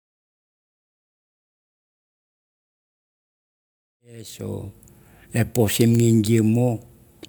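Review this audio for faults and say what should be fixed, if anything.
No faults found; nothing needs fixing.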